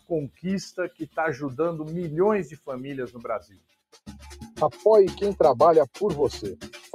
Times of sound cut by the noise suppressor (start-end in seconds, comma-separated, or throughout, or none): 0.29-0.45, 0.89-1.17, 2.46-2.69, 3.07-4.08, 6.64-6.95